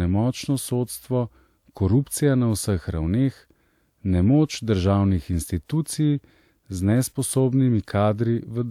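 Listening closely to the speech recording, nothing stood out as a technical fault at any point.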